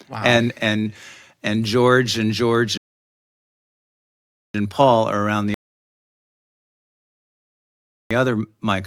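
At 2.77 s the speech halts and falls to silence until 4.54 s, then picks up from the exact point where it stopped. The same happens again from 5.54 s to 8.11 s. These are rebuffering stalls: the player exhausted its downloaded audio and waited for more. Unlike a dropout, nothing is skipped; the pauses, about 1.8 s and 2.6 s, simply add time while the speech itself stays intact.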